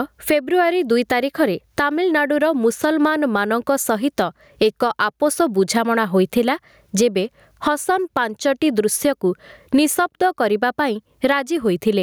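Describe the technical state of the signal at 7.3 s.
Gain pumping is present at 7.3 s, as throughout the clip: the gain swings by around 20 dB, squashing loud and soft parts closer in level, likely from excessive gain feeding a fast limiter.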